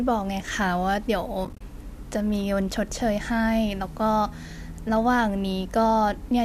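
A speech clip with AAC frame loss and muting between 1.45 and 1.61 s. Brief gaps scatter across those 160 ms, about 90 ms in total, the longest around 30 ms. The decoder zeroed the missing frames. Overlapping windows fade each hole softly. The light coding texture likely comes from low-delay AAC compression.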